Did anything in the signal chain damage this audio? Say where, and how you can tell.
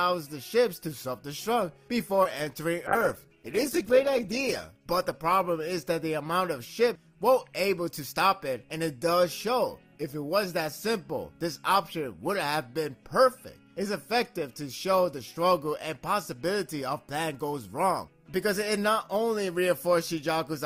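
Yes, and it's all on the call side, network and jitter buffer plus the codec.

First, a short stall from a late packet at 2.15 to 2.19 s. The jitter buffer ran dry, so the receiver held the last bit of sound for about 21 ms until the packet turned up, then carried on from the same spot. Nothing is actually lost, but that hold adds 21 ms of delay, and you can hear the sound sit still for a moment.

Right after, at 2.23 to 2.27 s, there's a short concealed packet loss. About 20 ms of audio never made it to the decoder in time, and the receiver papered over it with roughly 15 ms of synthesised continuation before blending back into the real signal. It comes across as a brief smear rather than a clean gap, and whatever fell in that window is gone.

Then a call bitrate drop from 2.87 to 5.99 s. The bandwidth estimate fell and the encoder went from 48 kbps down to 11 kbps, sitting at the bottom for about 1.3 s. 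Opus at that rate has far fewer bits to spend, so the coding gets coarse and the sound turns rougher and more watery. It climbs back before the clip ends.

Last, a jitter buffer speed-up at 7.91 to 8.29 s. The buffer was holding more audio than its target, so to bring delay down it cut out short pitch-period chunks, around 40 ms in total. Playback runs at about 107% with pitch unchanged, and that's past the point where it starts to sound hurried.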